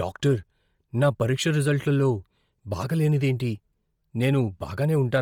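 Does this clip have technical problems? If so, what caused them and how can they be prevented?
Yes. Throughout the speech, heavy Bluetooth LC3 compression, likely the cause, leaves a breathy, grainy, noise-filled top end despite content reaching 20.2 kHz, consistent with about 32 kbps. Prevent it by raising the LE Audio bitrate or capturing over a wired path.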